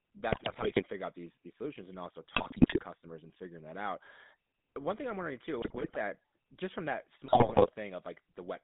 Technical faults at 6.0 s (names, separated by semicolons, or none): GSM full-rate codec; GSM bit errors